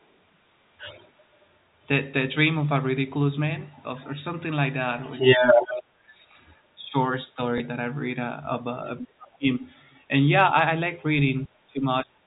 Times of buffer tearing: none

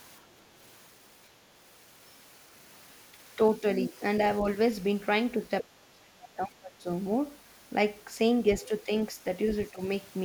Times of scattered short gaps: none

